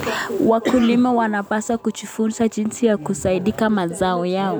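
No technical faults turn up anywhere in this speech recording, so there's nothing here to flag.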